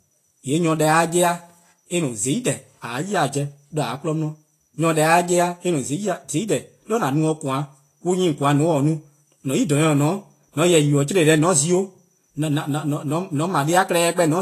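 From start to finish the speech sounds hissy and grainy, with the treble smeared into noise and nothing above about 14.2 kHz. That's likely Vorbis compression, quantising the top end coarsely, which fits a low bitrate around 32 kbps.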